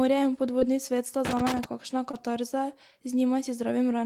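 At 0.59 s, just before "svet sta", there is a short concealed packet loss. About 20 ms of the stream arrived too late to decode. The receiver patched the gap by extending the preceding sound, then blended back. It is heard as a brief smear.

From 1.25 to 1.64 s, just after "svet sta", comes loose connector crackle. A contact is intermittently making and breaking, chopping the signal. It sounds like an irregular burst of scratchy crackle, lasting about 0.4 s.

At 2.11 s a second concealed packet loss occurs, again about 20 ms long. It is another short smear where the decoder filled the hole.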